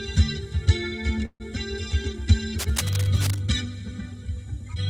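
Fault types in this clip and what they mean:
call audio freeze: At 1.25 s the sound stops moving forward for about 145 ms. The last sound is stretched into a fading buzz, then about 60 ms of silence follows. Nothing is lost; the sound resumes where it paused. Delayed packets draining the jitter buffer are the likely cause.
cable scratch noise: From 2.59 s to 3.40 s, dense, uneven bursts of scratching ride over the sound. They sit roughly 10 dB below it. A worn cable, connector or control being moved, with its contact resistance jumping rapidly, is the likely cause.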